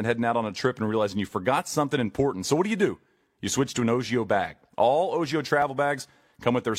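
At 5.62 to 5.67 s the speech jumps forward in a tiny skip. This is an overlap between stream segments: two pieces of the stream were stamped as covering the same stretch of time, so the player discarded about 43 ms it took to be duplicated, although that sound had not been doubled. On a waveform the trace breaks into a sudden step where the two sides fail to join. A spectrogram shows a thin vertical line across all frequencies at that point, with the speech on either side abruptly misaligned.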